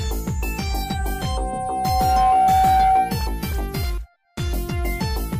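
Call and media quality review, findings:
Loudspeaker feedback squeal, 0.68–3.22 s: 757 Hz tone swells over roughly a second and a half, ending up about 10 dB over the audio. Mic catching its own speaker, loop gain above one.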